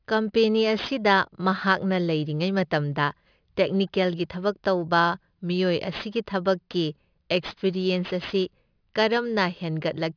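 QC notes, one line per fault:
Throughout: aliasing. The speech was brought down to a rate of 11 kHz without a proper anti-alias filter, so energy above 5.5 kHz folds back below it as false, unrelated tones. Sibilants sound gritty and metallic, with the folded energy sitting about 20 dB under the signal.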